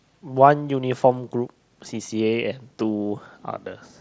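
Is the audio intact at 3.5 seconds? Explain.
Yes, the audio is intact at 3.5 seconds, with no fault at that moment.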